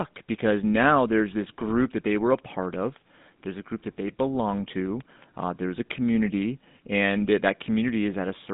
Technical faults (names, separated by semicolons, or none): GSM full-rate codec